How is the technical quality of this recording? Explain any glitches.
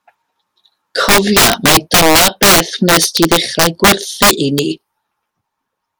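The recording is damaged by integer overflow throughout. Gain pushed about 9 dB past full scale wraps a few percent of loud speech peaks to the opposite sign, producing violent cracks sharper than clipping.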